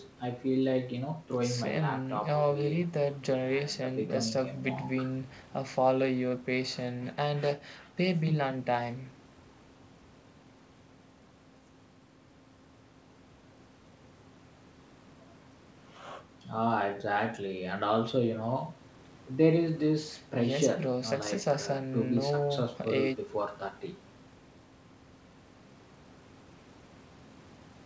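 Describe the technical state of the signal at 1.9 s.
At 1.9 s the speech is intact, with no dropout, distortion or other fault, just the call path's normal band limit, leaving nothing above 8 kHz.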